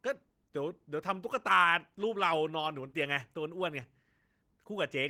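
Opus voice compression runs through the whole speech clip. Its sound fits a low bitrate of around 16 kbps in hybrid mode, with SILK coding the lower band and a CELT layer above 8 kHz. The coarsely coded excitation leaves the speech plainly hoarse and slightly robotic.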